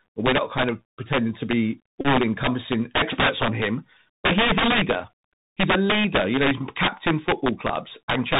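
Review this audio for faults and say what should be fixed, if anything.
Integer overflow runs through the whole clip. Loud peaks, driven about 14 dB past full scale, wrap to the opposite sign instead of limiting. The result is violent cracks on a small share of samples, far sharper than the flattened buzz of clipping. Prevent it with saturating arithmetic or a limiter before integer conversion.

The Bluetooth CVSD headset codec is also present throughout. Its one-bit up/down delta coding, consistent with a 64 kHz stream, stops everything above 4 kHz and leaves scratchy sibilants and granular hiss. It differs from wideband codec smearing by having no top end at all. Prevent it by using a wideband headset profile such as mSBC or a wired microphone.

A Bluetooth headset packet repeated between 2.01 and 2.07 s, after "of pretending to be" and before "encompassing experts on him". Runs of repeats, the longest roughly 30 ms, form a steady buzz near 267 Hz, from about nine lost 3.75 ms packets totalling about 34 ms. 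A two-packet repeat at 4.62 s, after "but he is a", lasts about 7.5 ms. The fixed pitch separates it from random dropout clicks. Prevent it by reducing radio interference and distance or by enabling packet-loss concealment.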